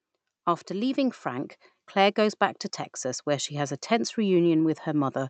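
From 0.68 s to 2.23 s the level climbs by about 4 dB in an automatic gain rising fault: the gain control judged the input too quiet and pushed its gain up steadily, so the speech and the background noise beneath it swell together until just before "back to". On a waveform the envelope widens gradually across that stretch. On a spectrogram every band, including the noise floor between syllables, brightens slowly, and above roughly 8 kHz it stays dark because of the call codec's bandwidth limit.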